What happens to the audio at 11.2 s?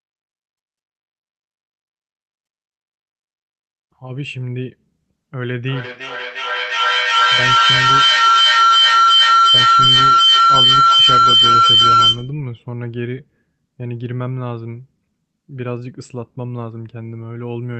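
At 11.2 s a feedback howl is present, running from 5.45 to 12.38 s. Sound loops from loudspeaker back into microphone, gaining level each pass, so a tone near 1.5 kHz builds as the loop repeats about every 400 ms, peaking about 13 dB above the speech. A spectrogram shows a bright, narrow horizontal band; the waveform envelope swells well past the speech.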